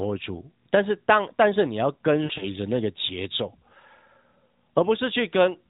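Between 2.24 and 2.47 s the speech breaks up with lost AMR speech frames: about 80 ms of frames fail, scattered over 160 ms, the longest run 60 ms. The decoder fills each gap by repeating the last good pitch and vocal tract settings at falling gain, so the sound smears into a brief drawn-out, fading warble. Unlike a plain dropout, there is no hard silence or click. The speech returns weak or rough for a moment, through narrowband AMR-NB audio capped at 4 kHz.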